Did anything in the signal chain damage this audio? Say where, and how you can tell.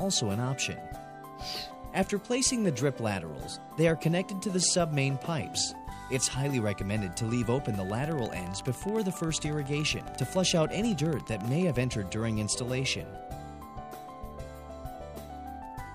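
Yes. A train of clicks runs from 7.9 to 11.85 s: regularly spaced pulses at 14.2 per second, around fifty in all, each about 5 dB above the surrounding sound and alike in shape, ticking over the audio and through its pauses too. The steady, repeating pulse most likely points to the analogue stage, with something injecting a pulse from nearby equipment, a faulty connection or a power supply, rather than to damage in the stored audio.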